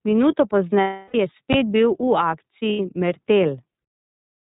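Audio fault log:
throughout: iLBC codec. The audio is confined to narrowband, so a spectrogram shows a hard ceiling at 4 kHz with nothing above it. Each 30 ms frame's excitation is coded on its own, which gives the speech a plainly audible rough, slightly synthetic edge. The frame rhythm and overall grain point to iLBC's 30 ms mode at about 13.33 kbps.
0.80–1.15 s and 2.70–2.80 s: lost iLBC frames. The first gap lasts 330 ms and the second 90 ms, which fits runs of eleven and three lost 30 ms frames. In each gap the decoder repeats the last pitch cycle mixed with noise, so it sounds like a held, buzzy, breathy vowel. The longer gap fades as the concealment runs on. A spectrogram shows flat, frozen harmonic stripes that thin toward noise. Because the frames stand alone, the voice recovers at once.
1.53 s: invalid numbers at full scale. For about 11.6 ms the output jumps to one extreme value far beyond the speech peaks, which fits a 512-sample processing block whose calculation produced infinite or invalid numbers. 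The block is so short that the loud edges at its start and end merge into a single hard bang. The waveform shows a flat rectangular slab held far from zero. On a spectrogram it appears as a bright vertical line across the spectrum.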